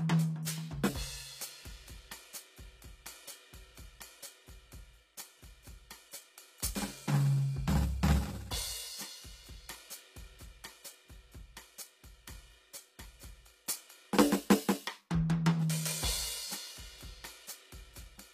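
HE-AAC compression runs through the whole piece of music. Nothing sounds above 14.9 kHz, and the treble below that cut-off is synthetic, with gritty, metallic cymbals. The likely cause is spectral band replication: the encoder keeps only the lower spectrum and fakes the top by copying lower bands upward under a coarse envelope, so harmonics misalign across the crossover. The plainly audible damage fits a bitrate around 24 kbps.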